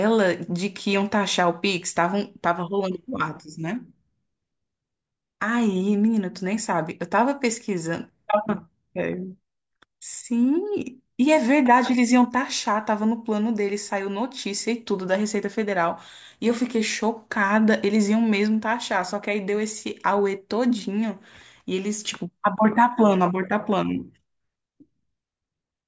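No technical faults are audible anywhere in this speech recording.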